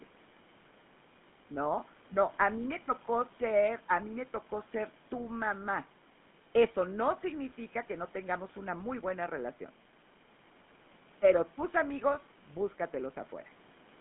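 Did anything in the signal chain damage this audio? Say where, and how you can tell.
Yes, at the codec stage: the speech ran through a GSM full-rate codec for the whole clip, the band sitting between about 150 Hz and 3.5 kHz, which fits the 13 kbps full-rate coder. Its pulse-driven vocal-tract model gives the voice a plainly audible buzzy, gravelly roughness.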